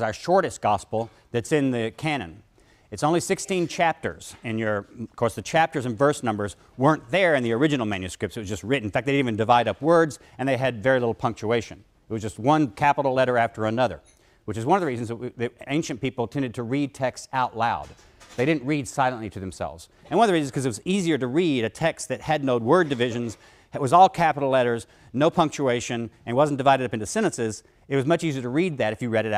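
No technical faults detected.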